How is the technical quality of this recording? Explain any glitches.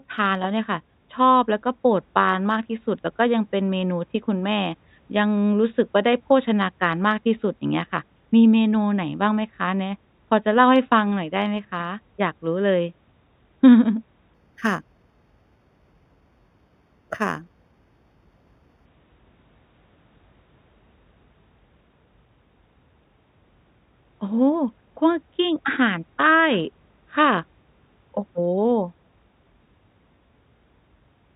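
One stretch of the speech has a resampling problem. From 14.34 to 18.86 s there is imaging from linear upsampling. The sound appears to have been raised from 8 kHz to 48 kHz by straight-line interpolation, which dulls the top of the band and leaves a mirrored copy in the 4 to 8 kHz range, roughly 25 dB down. It comes through as a faint metallic shimmer on sibilants. Unlike aliasing, the stray energy sits above the original band rather than folding down into it.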